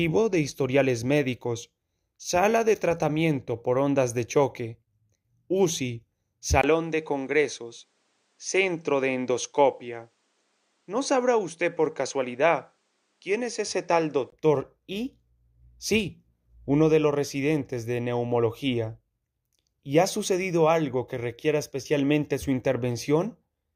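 Between 6.62 and 14.32 s the sound loses everything above 10.1 kHz, with a 20 ms gap at the change, and a faint new noise floor appears; likely the input switched to a poorer device.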